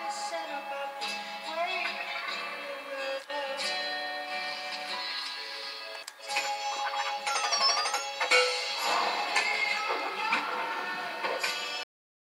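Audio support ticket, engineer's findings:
Cut-off end at 11.83 s. Sound stops mid-event, straight to digital silence, no decay tail; silence holds to end of file, about 0.4 s. Probable component: capture/write stage at stop. Mechanism: final buffers never flushed to file or output before the stream closed, so content after 11.83 s was discarded rather than faded. Hard edge from signal to silence at the truncation point. Check stop/close handling for a missing drain of pending buffers.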